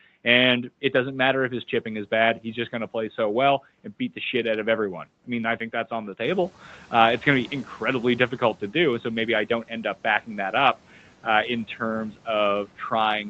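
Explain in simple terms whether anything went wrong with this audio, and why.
One thing slips here: noise suppressor catching up. Right after "think that's on the", at 6.25 s, the background noise gets louder and briefly leaks through before the cleanup adjusts. It takes about a quarter of a second, settling by 6.49 s.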